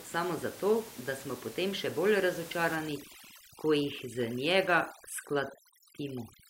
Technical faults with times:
2.76-6.50 overdone noise removal

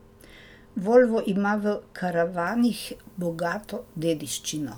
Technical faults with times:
2.47-4.77 pre-emphasis left on

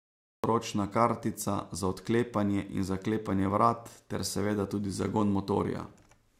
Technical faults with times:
0.00-0.44 cut-off start

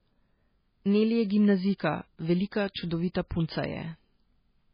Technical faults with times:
0.00-4.74 MP3 compression
2.74 pre-echo
3.14 pre-echo

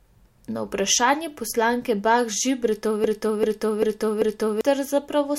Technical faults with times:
3.04-4.61 broken-record loop

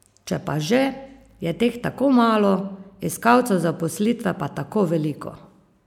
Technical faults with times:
0.32 dropped samples

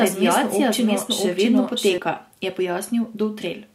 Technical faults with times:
0.00-1.98 doubled audio track

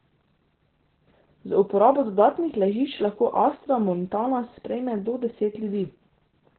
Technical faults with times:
0.00-6.58 Opus voice compression

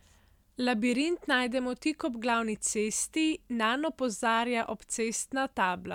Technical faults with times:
none

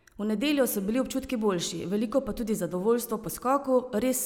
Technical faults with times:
none

